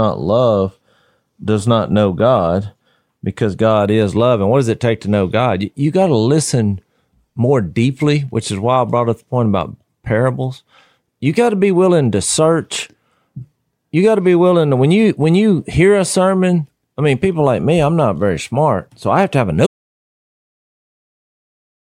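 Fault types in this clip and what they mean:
Audio dropout to silence: At 19.67 s, right after "have to have a", the speech stops mid-phrase and the last 2.24 seconds, running to the end, are silent, with no room tone at all. The likely cause is lost input, such as a disconnected device, failed link or stray mute, while the recorder kept writing silence. On a waveform the trace collapses to a flat line, and a spectrogram shows a hard vertical edge followed by empty black.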